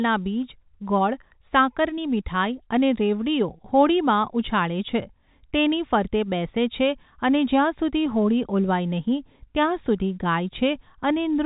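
No technical faults can be heard anywhere in the speech. It comes over a G.711 telephone path, so nothing above 4 kHz is present, and a faint noise rides along with the level of the speech, well beneath it.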